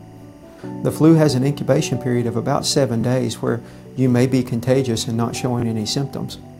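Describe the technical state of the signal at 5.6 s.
At 5.6 s, from 5.60 to 5.63 s, a Bluetooth stutter occurs. About 23 ms of audio failed to arrive, which fits a single lost packet, so the receiver replayed its previous buffer. That produces a brief repeated-slice glitch before playback resumes further along. Beneath it, timecode bleed is present as it is across the whole clip: a 24 frames-per-second linear timecode square wave leaking in at about 40 dB below the signal, switching between pitches near 1 and 2 kHz and heard as a faint chirping warble.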